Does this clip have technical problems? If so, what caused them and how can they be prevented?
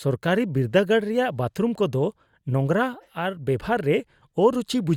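No, the signal shows no technical faults, so there is nothing here to trace to a cause or guard against.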